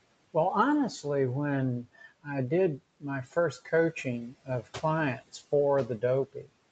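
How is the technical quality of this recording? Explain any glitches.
The recording has one glitch: speech cut by the noise suppressor. Between 4.3 and 4.76 s, parts of the speech drop by up to about 13 dB, around 150 ms in total. The suppressor mistook these quiet stretches for background noise and turned them down with it. They come out swallowed and faint. The room noise sits about 23 dB below the speech. The call microphone processing leaves nothing above 8 kHz.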